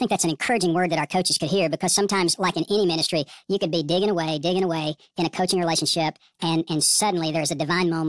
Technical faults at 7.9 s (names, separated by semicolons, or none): wrong sample rate